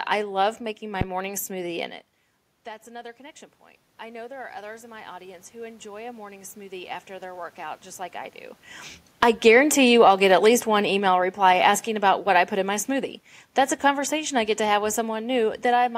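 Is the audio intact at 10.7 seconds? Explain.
No. At 10.7 s the clip is inside an automatic gain falling episode running from 9.14 to 12.85 s: the gain control judged the input too loud or its background noise too strong and eased its gain down by about 7 dB, so the speech and the room noise behind it sink together.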